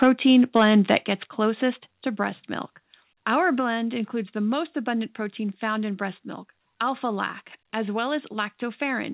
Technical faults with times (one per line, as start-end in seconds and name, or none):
0.02-0.07 microphone overload
0.04 microphone volume stepped down
0.55-0.97 microphone overload
1.05 microphone volume stepped down
3.60 microphone volume stepped down